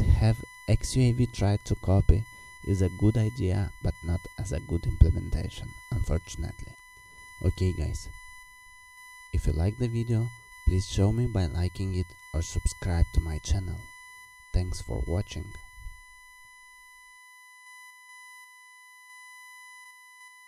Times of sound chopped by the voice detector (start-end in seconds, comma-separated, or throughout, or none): none